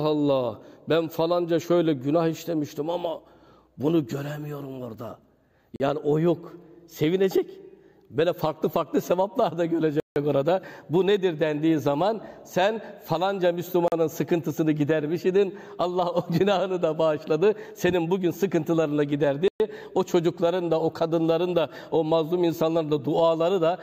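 The audio has four blocks of digital silence, where the signal drops straight to silence with no fade: 40 ms at 5.76 s and 13.88 s, 160 ms at 10.0 s, and 120 ms at 19.48 s. That pattern points to the output buffer not being filled in time.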